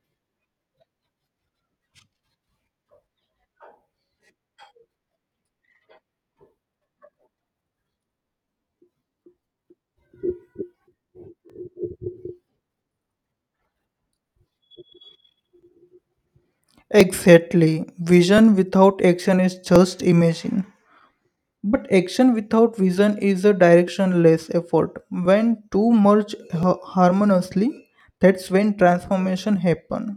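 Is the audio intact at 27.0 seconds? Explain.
No. Clock drift buffer slips run from 0.51 s to 29.38 s, so 27.0 s falls inside them. A short click or pop interrupts the speech every 1.38 s. This is likely two devices on independent clocks disagreeing by roughly 1000 ppm, so the buffer between them drifts until a small block, which fits around 70 samples, is dropped or repeated. That happens about 20 times across the span.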